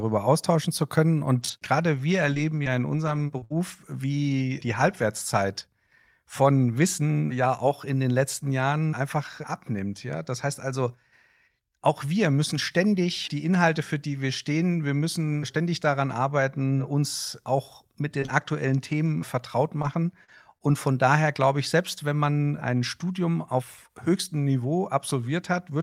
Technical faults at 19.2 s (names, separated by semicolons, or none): scattered short gaps